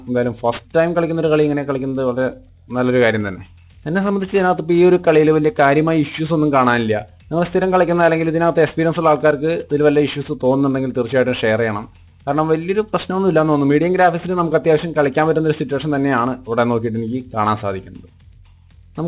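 Aliasing throughout: unfiltered content above 4 kHz folds back as gritty, metallic tones about 25 dB down, and the spectrogram fills solidly right up to 4 kHz.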